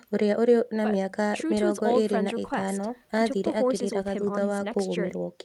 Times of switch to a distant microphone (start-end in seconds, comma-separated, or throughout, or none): none